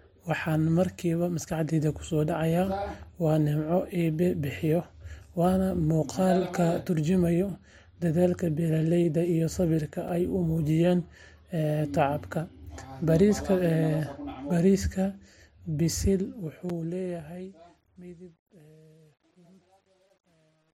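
A speech clip with two brief dropouts to digital silence and a fade-out that breaks up as it gets quiet. The first block of digital silence lands at 10.08 s, between "dadaalkii beeralayda iyo samirka" and "ay u", and the second at 16.70 s. Each is a 5.8 ms hole where the signal jumps straight to zero and back, heard as a tick rather than an audible gap. The length fits a 256-sample buffer that was not filled in time, so the output held zeros for one block. The second kind of fault is truncation distortion on the fade. The fade-out starts at 15.88 s and runs to the end of the clip at 20.73 s. From 15.88 s the quiet end turns gritty, and from 17.63 s it is at its worst. The fade is being computed with too few bits and no dither, consistent with about 10-bit resolution, so low-level detail collapses into coarse square steps.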